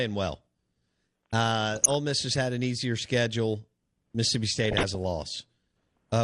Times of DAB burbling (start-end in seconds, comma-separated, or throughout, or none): 1.74-1.95, 4.54-4.95